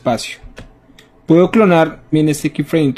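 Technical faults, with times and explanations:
2.09–2.14 s, stream segment skipped: the sound abruptly jumps ahead with a short blip, likely because one stream segment failed to load and playback resumed at the next.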